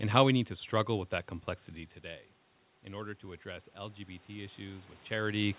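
From 3.0 s to the end, voice and background noise swell together; this is automatic gain rising, as the control lifts its gain after the input fell about 13 dB.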